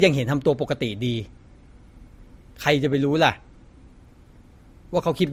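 Across the whole speech clip there is a layered quality where two different kinds of coding damage sit on top of each other, most likely from transcoding between lossy codecs, consistent with an MP3 at around 52 kbit/s later re-encoded as Opus at about 48 kbit/s. The second encoder spends its bits reproducing the first one's artefacts, so both codecs' artefacts are heard together. On a spectrogram, energy stops at 20.2 kHz.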